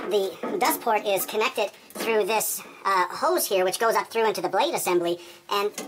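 Throughout, a wrong sample rate: the sound runs 1.5 times fast and 7.02 semitones high, which fits 32 kHz material played at 48 kHz. Unlike pitch shifting, speed and pitch rise together.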